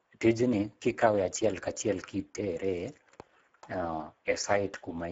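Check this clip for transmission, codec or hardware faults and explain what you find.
There's one fault, a codec problem running the whole way through: Speex codec damage. Start to finish, the speech sounds noisy and hoarse, and the damage is plainly audible. The CELP coder is short of bits for the excitation, which fits a bitrate around 10 kbps. Nothing gets through above 7.7 kHz.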